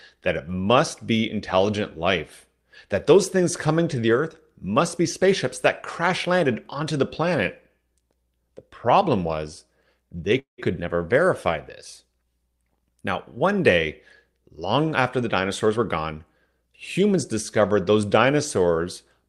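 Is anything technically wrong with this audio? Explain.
Yes, there are two faults in this speech.

At 10.39 to 10.60 s there is a call audio freeze: the sound is stretched into a fading buzz, then about 130 ms of silence, before resuming where it stopped. A jitter buffer likely ran empty while packets were delayed. On a spectrogram, the last harmonics smear flat and fade into a blank gap.

From 15.49 to 16.63 s there is a jitter buffer speed-up. Short pitch-period chunks, about a tenth of a second in total, are cut to drain excess buffering, so speech runs at 107% speed with unchanged pitch and sounds hurried. Harmonic spacing on the spectrogram stays the same while syllables sit closer together.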